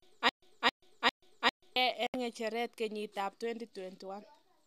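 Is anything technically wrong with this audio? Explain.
Yes, there are two faults in this speech clip.

From the very start to 1.76 s there is a stutter with silent gaps. A fragment of about 290 ms repeats four times, each followed by about 110 ms of digital silence, at a steady 400 ms period. This is likely a stalled stream replaying its last buffer before running empty, and the speech for that span is lost.

From 2.07 to 2.14 s there is a digital broadcast dropout. The audio cuts to silence for about 72 ms, which fits a few corrupted frames being muted by the receiver, then resumes at "ng'echeret kenyiit ab" with the missing speech gone.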